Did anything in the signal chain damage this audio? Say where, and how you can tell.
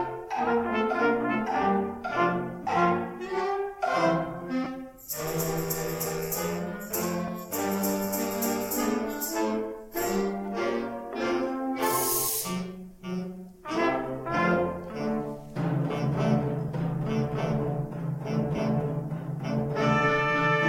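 Yes: brief noisy smears replacing the sound at 2.63–2.67, 4.64–4.67, 7.27, 16.68 and 18.56–18.59 s are lost LE Audio frames over the Bluetooth link, concealed by the LC3 decoder's noise-like spectral repeats, fitting 7.5 ms frames.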